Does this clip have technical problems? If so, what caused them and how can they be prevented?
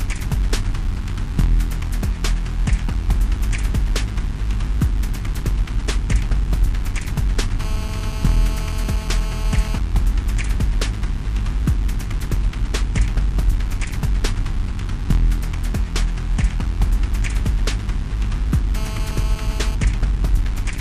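Yes: GSM phone buzz from 7.60 to 9.78 s and from 18.76 to 19.75 s, a hard, raspy 217 Hz drone with dense harmonics sitting about 17 dB below the signal. A nearby 2G phone on a call was pulsing its transmitter 217 times a second, and the audio circuitry rectified those radio bursts into a steady buzz. To prevent it, keep phones switched off or in flight mode and well away from microphones, cables and preamps while recording.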